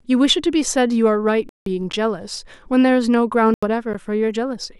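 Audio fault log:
1.49–1.66 s and 3.54–3.63 s: corrupt frame muted. The speech drops abruptly into dead silence, about 0.17 s the first time and 0.09 s the second. That fits damaged compressed frames the decoder threw out and replaced with silence, roughly four frames, then one. Timing stays intact afterwards.
1.92 s and 3.93 s: gap between chunks. There are two tiny hard-edged holes of 12 ms each, landing 2 s apart. That spacing points to audio delivered in 2 s chunks with a sliver of silence at each join. Nothing's missing, but the flow gets briefly nicked.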